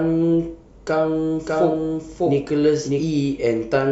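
From about 1.47 s to 3.03 s the speech turns into a doubled audio track: a second full-band copy of the same speech runs roughly 0.7 seconds behind the first, at about the same loudness, so the two overlap and compete. The copy has no room tone or decay, and it cuts in and drops out abruptly. It's likely a second capture through a slower path, or an edit leaving two copies out of step.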